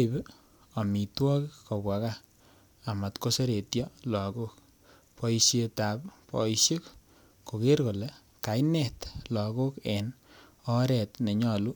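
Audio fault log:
Nothing to log here, as the speech runs along without any technical faults turning up anywhere in the recording.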